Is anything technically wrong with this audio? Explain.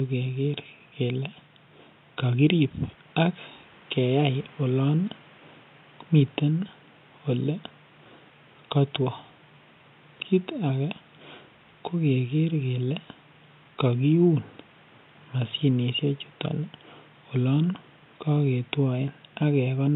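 No, nothing is technically wrong.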